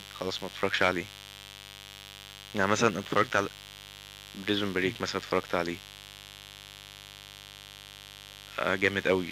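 Speech runs over a steady, raspy mains buzz from start to finish. It is built on 50 Hz harmonics reaching into the kHz range, from switching spikes entering twice per cycle, and sits roughly 20 dB below the speech.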